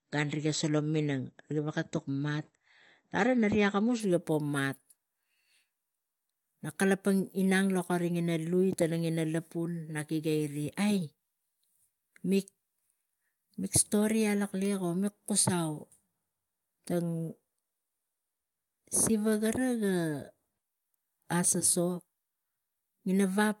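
Speech, and the first four seconds are the weak spot: it's a classic adaptive stream starting at a low bitrate. From 0.0 to 4.0 s there's nothing above 8 kHz, so everything sounds dull and a bit swirly with heavier codec artefacts, which fits a low-rate AAC rung around 32 kbit/s. At 4.0 s the player has sized up the connection and jumps to a richer version, maybe around 96 kbit/s, and the treble snaps back with no gap.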